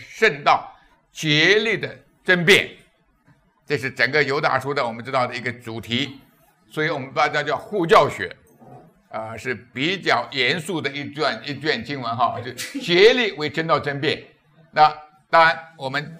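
No technical faults are audible.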